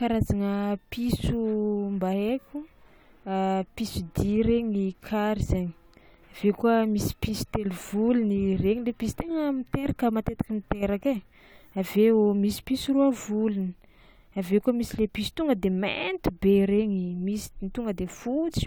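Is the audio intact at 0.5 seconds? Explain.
Yes, at 0.5 seconds the speech plays through intact, with no dropout, click or other audible fault at that point.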